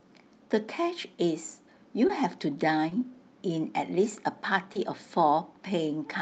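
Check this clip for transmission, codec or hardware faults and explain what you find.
There's one problem here, short concealed packet loss, and it happens three times: around 2.07 to 2.11 s, 2.89 to 2.93 s and 4.73 to 4.77 s. Each time roughly 20 ms of audio didn't arrive in time, so the receiver invented a stand-in by extending the preceding sound and then crossfading back into real audio. You hear each one as a tiny smear or flutter, and a brief consonant right there can get swallowed.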